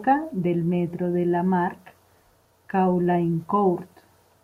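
No technical faults can be heard anywhere in the recording; the signal holds steady throughout.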